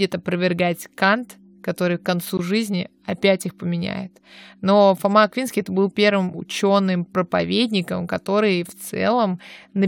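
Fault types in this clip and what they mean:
Block of digital silence: a short hole in the speech at about 2.37 s, between "который к концу" and "жизни опять их поменяет", where roughly 17 ms of samples drop straight to silence and back with no fade, most likely because the output buffer wasn't filled in time.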